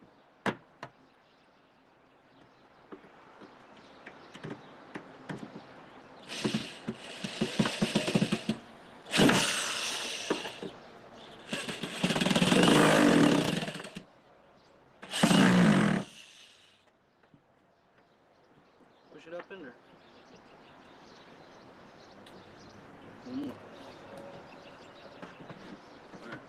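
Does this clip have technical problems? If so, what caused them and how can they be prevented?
No, nothing here sounds like a technical problem, so there's nothing to trace back or guard against this time.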